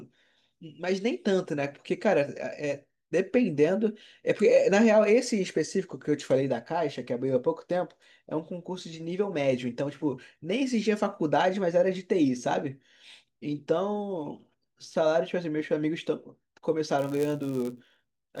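From 16.98 s through to the end at 18.4 s there's a block size mismatch, padded: each block arrives slightly short and gets zero-filled, so a tiny gap lands in every one. You hear a roughly 100 Hz buzz, and the speech runs at 0.996 speed with timbre basically unchanged.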